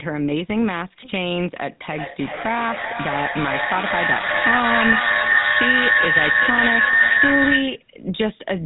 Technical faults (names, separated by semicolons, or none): GSM full-rate codec; feedback howl